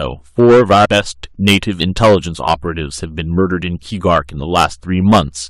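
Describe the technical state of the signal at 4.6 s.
At 4.6 s the signal drives about 11 dB past what a stage in the chain can pass, so from 4.56 to 4.65 s the waveform peaks are sliced flat. This is hard clipping, and those squared-off tops add high harmonics, heard as a brief harsh crackle on the speech.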